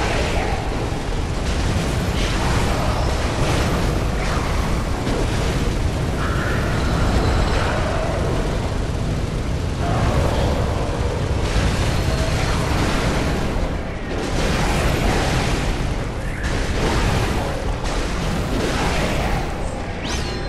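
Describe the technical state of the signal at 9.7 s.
At 9.7 s the signal is intact, with no audible technical fault at that point.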